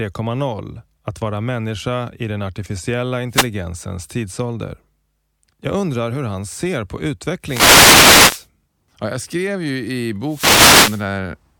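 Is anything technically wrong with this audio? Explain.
Yes. The speech is hit by wireless microphone noise hits three times: 3.29 to 3.49 s, 7.42 to 8.48 s, and 10.26 to 11.07 s. Each is a dropout in the analogue FM radio link. Reflected signals arrive out of phase and cancel the carrier at the receiver, so receiver noise surges up. Each hit is heard as a swish or burst of static over the voice. The longer second and third hits last about a second and under a second.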